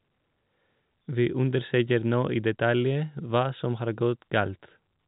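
No technical faults can be heard anywhere in the speech. It carries the narrow band of G.711 telephone coding, with nothing above about 3.8 kHz.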